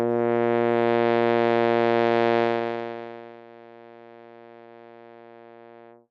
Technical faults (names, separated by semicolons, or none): zipper noise